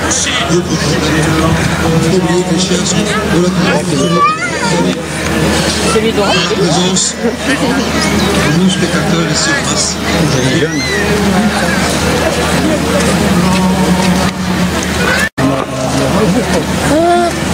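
Gain pumping runs throughout. The gain swings by about 15 dB. Likely cause: excessive gain feeding a fast limiter.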